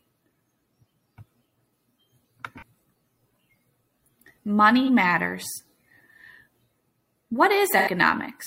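At 2.57 s, 4.83 s and 7.77 s, AAC frame loss with concealment leaves brief smeared, noisy patches of about 43 ms, then 85 ms at the end. The decoder repeats the last good spectrum rather than leaving silence, which separates it from a plain dropout.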